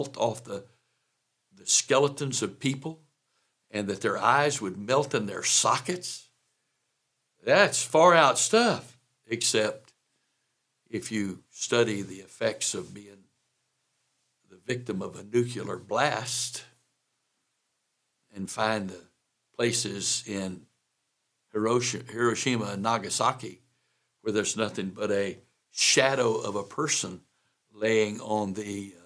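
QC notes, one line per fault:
No faults detected.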